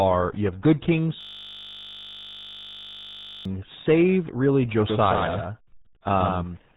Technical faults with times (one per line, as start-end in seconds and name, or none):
0.00-6.76 RealAudio 14.4 codec
1.21-3.45 system hang loop
4.90-6.76 doubled audio track